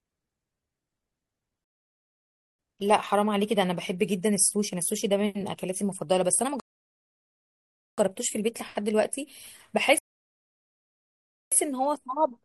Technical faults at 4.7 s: none

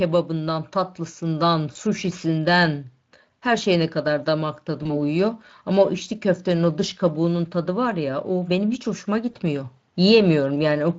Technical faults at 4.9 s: VoIP packet loss concealed by the speech codec

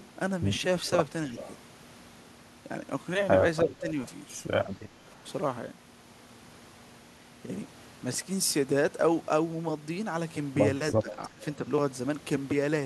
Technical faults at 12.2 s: none

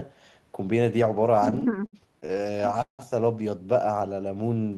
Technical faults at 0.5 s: none

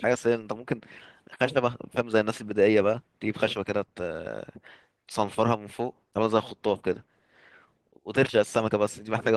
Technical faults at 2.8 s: none

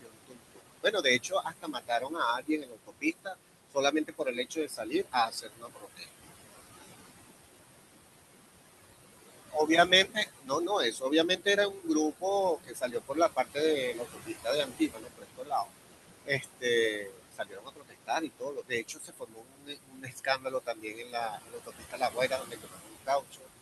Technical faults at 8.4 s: noise suppressor artifacts

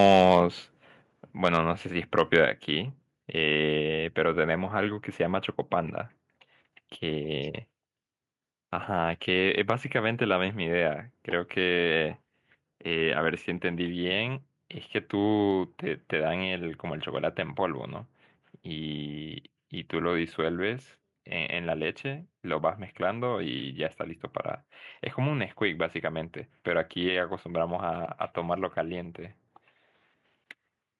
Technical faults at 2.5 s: microphone volume stepped down

